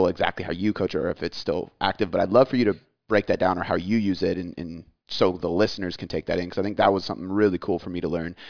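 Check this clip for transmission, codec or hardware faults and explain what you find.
No transmission, codec or hardware faults are audible anywhere in the speech.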